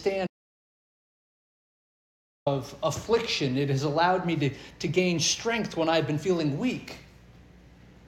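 An audio dropout to silence runs from 0.27 to 2.46 s, about 2.2 s of lost material where the sound cuts out mid-flow with no room tone left. The likely cause is a lost input, such as a disconnected device, a failed link or a stray mute, while recording continued. A waveform shows a flat line, and a spectrogram shows an empty band.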